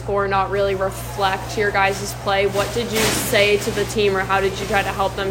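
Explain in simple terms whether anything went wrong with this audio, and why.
Nothing went wrong here: the signal stays intact throughout, with no technical faults to be heard anywhere in the audio.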